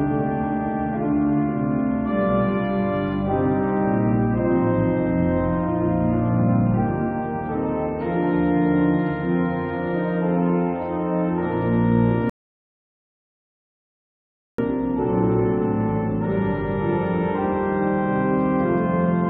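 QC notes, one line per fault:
12.30–14.58 s, rebuffering stall: playback halts for about 2.29 s while the player waits for more downloaded audio, then picks up exactly where it stopped, so nothing is lost but time is added. The waveform shows a flat silent gap, and the spectrogram a blank band across all frequencies.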